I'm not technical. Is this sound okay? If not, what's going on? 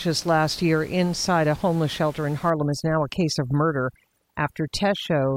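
No. From about 2.50 s, right after "a homeless shelter in", and on to the end, there is overdone noise removal. A cleanup tool set too strong starts switching off bits of the sound it mistakes for background hiss, taking quiet parts of the speech along. The gentle room noise earlier drops and breaks up into twinkling, warbling specks. A simply muffled recording would sound dull but keep its background.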